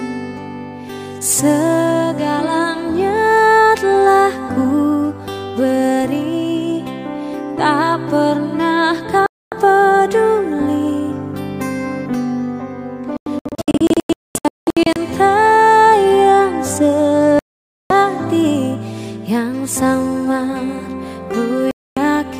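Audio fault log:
9.26 to 21.97 s, digital broadcast dropout: the receiver muted on failed frames at 9.26 s (about 0.26 s), 13.17 to 14.96 s (scattered holes, longest 0.22 s), 17.39 s (0.51 s) and 21.71 s (0.26 s). The sound is lost, leaving flat waveform and blank vertical spectrogram bands.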